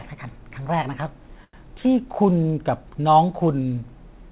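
At 1.44 s the speech catches on a short stall from a late packet. The jitter buffer ran dry and the receiver held the last sound for about 92 ms until 1.55 s, then resumed where it left off. Unlike a lost packet, nothing is skipped. The sound is only stretched, with a faint buzz or dip, and everything after arrives 92 ms later, over a call path whose band stops at 4 kHz.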